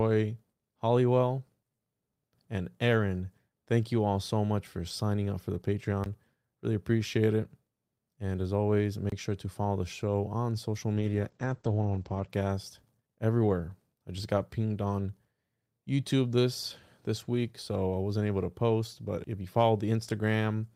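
At 6.04 to 6.06 s, right after "signing up for the", a 20 ms block of digital silence cuts the speech. The output buffer likely went unfilled and was replaced with zeros, so the waveform drops abruptly to a flat line and jumps back, leaving a brief hole. The same happens at 9.10 to 9.12 s, 25 ms long, between "as always" and "sure to follow the". At 20.09 s a 7 ms gap is short enough to sound like a single tick. On a spectrogram each gap is a thin vertical blank column.

From 10.94 to 12.35 s, after "the show on social", a call bitrate drop makes the speech watery and muffled. A falling bandwidth estimate pushed the encoder to far fewer bits, which fits a fall from around 40 kbps to 12 kbps. For about 1.3 s the bandwidth shrinks from 20 kHz to 8 kHz, and the spectrogram shows a flat ceiling at 8 kHz with smeared, blotchy energy below it.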